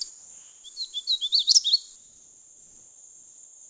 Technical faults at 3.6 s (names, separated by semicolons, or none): comfort noise in place of the background